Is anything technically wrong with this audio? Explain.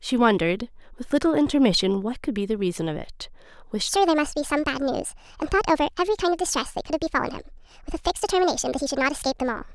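Yes, a section at the wrong speed from 3.89 s onward: a likely clock mismatch plays it 1.53 times fast, so the speech turns hurried and about seven semitones higher.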